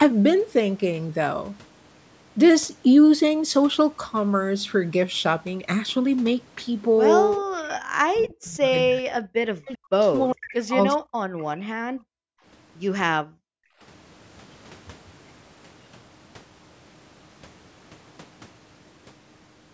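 From 7.51 to 10.08 s, then 10.32 to 10.76 s and 10.96 to 11.22 s, the speech dips by roughly 40 dB. This is likely speech suppressed in double talk, with the canceller ducking the talker while the far side spoke.

At 11.37 to 11.57 s, a faint delayed copy appears, about 0.4 s late and about 30 dB down. It is likely an echo leak from a far-end loudspeaker.

From 11.57 to 12.44 s and 13.23 to 13.80 s, the room sound drops out, by about 39 and 40 dB. This is background gated by the echo canceller during loudspeaker playback.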